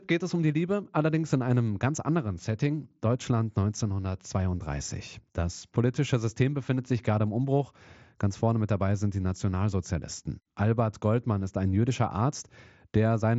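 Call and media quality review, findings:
Nothing stood out on listening to this speech clip, which comes through the wideband Bluetooth mSBC headset path with its usual 8 kHz ceiling.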